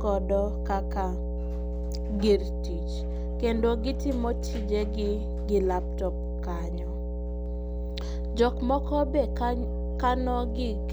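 From start to finish there's mains hum, a steady 60 Hz drone about as loud as the speech itself, probably a ground loop or transformer bleeding into the line.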